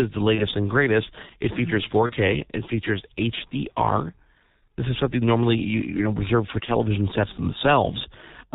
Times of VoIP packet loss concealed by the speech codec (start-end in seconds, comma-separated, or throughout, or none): 0.35-0.47, 2.06-2.13, 6.65-6.70